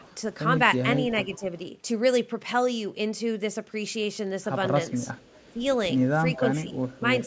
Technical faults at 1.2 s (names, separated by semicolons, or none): echo leak